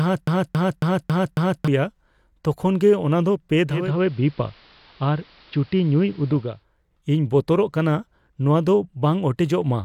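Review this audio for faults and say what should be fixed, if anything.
A broken-record loop runs from the start to 1.68 s. It is already going when the clip begins. A 274 ms fragment repeats exactly, five times. A stalled stream likely kept resending its last piece, so the audio meant for that span is lost. Keep playback buffers fed and restart stalled streams.

After "ᱫᱚ ᱯᱮ", at 3.65 s, the digital radio blends to analogue. A 367 ms cross-fade brings in the AM broadcast. Hiss sits about 30 dB down. Level stays unchanged. The blend back comes at 6.66 s. Strengthen digital reception with a better antenna or placement.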